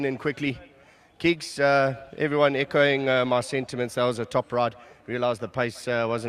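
No technical faults can be heard anywhere in the audio.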